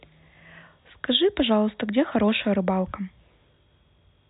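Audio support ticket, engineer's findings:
No technical faults found on listening; the speech signal holds steady throughout, with nothing audible to attribute to any component in the chain.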